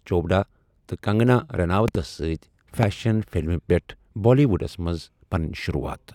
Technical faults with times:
1.88-1.97 loud pop
2.83-2.85 loud pop

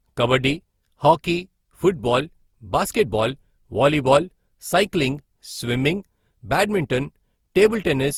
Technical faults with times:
0.00-8.18 generation loss

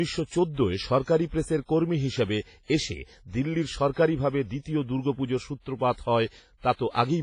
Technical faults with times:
0.00-7.23 WMA compression

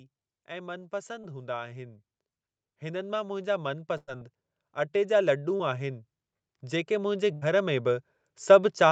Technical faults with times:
0.47-1.96 automatic gain rising
1.21-1.25 short concealed packet loss
2.67-4.34 automatic gain rising
3.97-4.09 burst of packet loss
5.57-5.61 short concealed packet loss
6.61-8.92 automatic gain rising
7.33-7.43 burst of packet loss

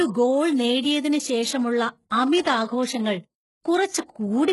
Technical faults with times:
0.00-4.53 HE-AAC compression

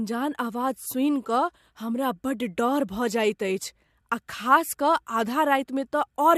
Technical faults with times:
none

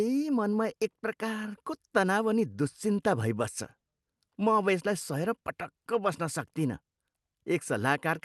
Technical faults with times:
none

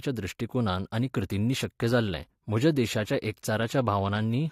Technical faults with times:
0.86-4.51 adaptive stream at a lower bitrate

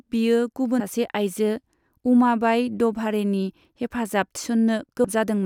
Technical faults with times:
0.79 compressed frames skipped
5.03 compressed frames skipped

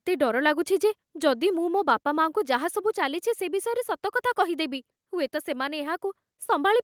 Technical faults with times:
2.04 microphone volume stepped down

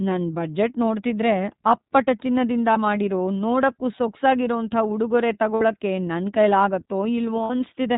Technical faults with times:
0.00-7.97 iLBC codec
2.72-2.78 lost iLBC frames
5.55-5.62 lost iLBC frames
7.44-7.50 lost iLBC frames

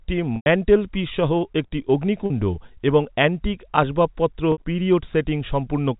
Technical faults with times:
0.36-0.46 packet loss with pitch repetition
2.26-2.30 packet loss with pitch repetition
4.52-4.58 packet loss with pitch repetition

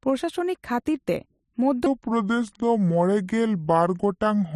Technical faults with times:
1.86-4.55 section at the wrong speed

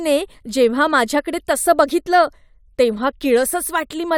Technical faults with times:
none

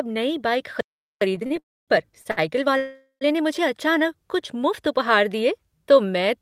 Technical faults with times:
0.81-1.21 playback stall
1.21-3.71 time-compressed catch-up
1.46-1.52 short stall from a late packet
1.59-1.90 call audio freeze
2.22-2.39 short stall from a late packet
2.77-3.23 call audio freeze

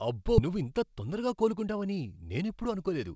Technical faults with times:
0.38-0.40 skip ahead
0.49-3.11 jitter buffer speed-up

